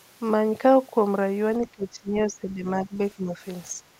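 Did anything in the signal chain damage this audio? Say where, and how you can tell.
Yes. The speech level sinks by up to roughly 15 dB from 1.6 to 2.99 s, then dips again from 3.15 to 3.41 s and from 3.74 to 3.84 s. This is call processing, likely speech suppressed in double talk, where the echo canceller mistook near-end speech for echo.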